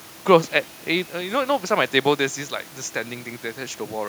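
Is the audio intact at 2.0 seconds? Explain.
Yes, at 2.0 seconds the audio is intact, with no dropout, distortion or other fault to be heard at that moment.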